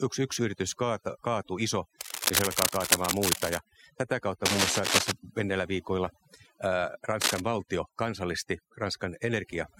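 A speech recording was run through overdone noise removal: the reducer's threshold sat so high that any frequency band near its noise estimate was pushed almost to nothing, and the quieter parts of the voice went with it. Across the whole clip the background falls to a floor sprinkled with twinkling specks. On top of that, a worn cable, connector or control was likely being disturbed, its contact resistance jumping about and injecting dense, irregular bursts of cable scratch noise. The first burst runs from 2.01 to 3.59 s, after "yritys kaata kaatuu iso" and before "tätä kautta", at about the level of the speech. The second runs from 4.45 to 5.12 s, between "tätä kautta" and "menneillä viikoilla ää", and is somewhat louder than the speech. The third is a short one from 7.21 to 7.41 s, just before "valtio kansallisti", again about as loud as the voice. Each is heard as scratching and rustling laid over the speech.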